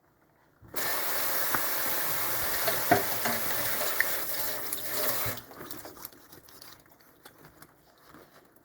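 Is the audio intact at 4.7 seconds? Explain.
Yes, the audio is intact at 4.7 seconds, with no dropout, click, distortion or other fault in the sound at that moment.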